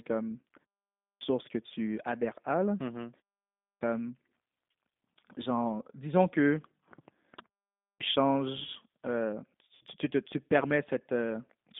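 Throughout, the speech passes through a G.729 codec at 8 kbit/s. The line spans only 200 Hz to 3.6 kHz, and the sound is plainly rough and synthetic.

From 9.75 to 9.85 s, between "changes euh" and "tu tu", comes VoIP packet loss concealed by the speech codec. About 60 ms is missing, consistent with three lost packets. The decoder stretches the last sound into a fading buzzy tone or coloured noise, and the voice stays weak or distorted as it recovers.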